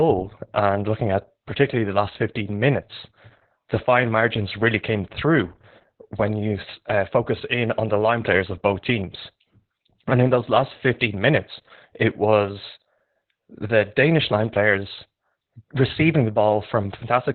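Opus voice compression runs through the whole speech clip. The codec is in its SILK linear-prediction mode at narrowband, so the band stops near 4 kHz, and the excitation is coded so coarsely that the damage is heavy. The sound fits a rate of about 8 kbps. Speech comes out muffled and boxy, hoarse and slightly robotic; the codec works in 20 ms frames.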